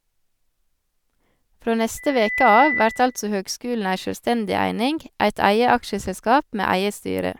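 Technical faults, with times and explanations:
1.97 to 3.23 s, loudspeaker feedback squeal: a pure tone at 2 kHz swells up over the speech in a little under half a second and holds, ending up around 5 dB louder than the speech itself. The microphone is picking up the loudspeaker it feeds, and at 2 kHz the loop gain exceeds one, so that frequency reinforces itself on each pass until it ends at 3.23 s.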